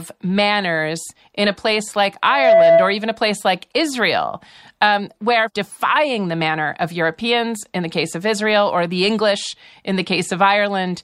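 From 2.24 to 3.02 s, just after "in a place like", a loudspeaker feedback squeal takes over: the microphone re-amplifies its own loudspeaker, loop gain exceeds unity at 666 Hz, and that tone swells within roughly a third of a second to about 10 dB above the speech, collapsing before "a place like".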